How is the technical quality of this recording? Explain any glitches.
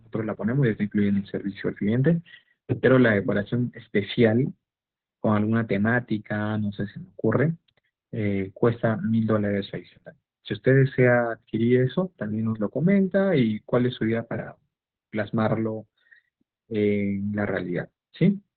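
The technical quality is poor, held back by heavy codec damage across the whole clip.

Opus voice compression runs throughout the speech. Nothing survives above about 4.4 kHz, which points to SILK narrowband mode at a very low bitrate, around 8 kbps. The linear-prediction coder quantises the excitation coarsely, so the speech sounds muffled, hoarse and slightly robotic.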